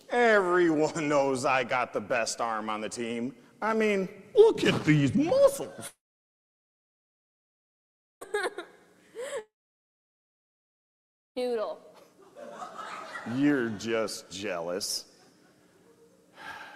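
From 5.87 to 8.23 s and again from 9.39 to 11.39 s, the audio fades into a brief decaying buzz and then near-silence, returning later with material skipped, likely a long network dropout. Unlike a short packet-loss glitch, each gap lasts about two seconds.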